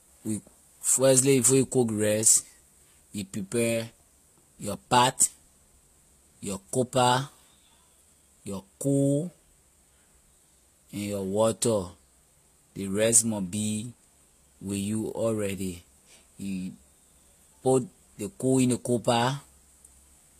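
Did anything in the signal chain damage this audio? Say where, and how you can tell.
Yes. The damage sits at the codec stage, and it runs through the whole speech clip. Nothing is heard above about 14.9 kHz. Two different kinds of coding artefact are heard together, not one clean set. This points to transcoding between lossy codecs, most likely a low-rate HE-AAC encode around 24 kbit/s later re-encoded as Vorbis near 61 kbit/s. The second encoder spent its bits reproducing the first one's artefacts, added its own, and kept the lower cut-off.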